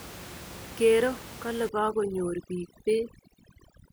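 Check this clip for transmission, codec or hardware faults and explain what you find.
One fault is present in this speech clip: overdone noise removal, running from 1.69 s to the end. Over that span an aggressively set noise reducer is shutting down individual frequency bands near its noise estimate, taking quiet speech detail with them. The room noise, about 17 dB below the speech, drops and breaks up into twinkling specks. Unlike a low-bitrate codec, the damage tracks the noise floor rather than the speech content.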